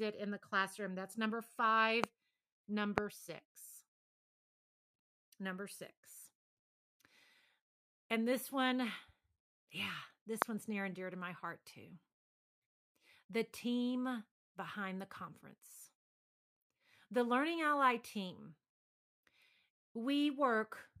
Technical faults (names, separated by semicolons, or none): loud pop